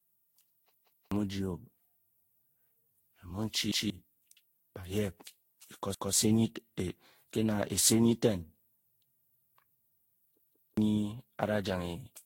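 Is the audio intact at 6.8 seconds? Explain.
No. Generation loss affects 6.8 s as it does the whole clip: the speech sounds swirly, hollow and smeared, with blurred attacks and nothing above 16.7 kHz, likely from around ten rounds of lossy re-encoding, each pass stacking fresh quantisation noise and spectral holes.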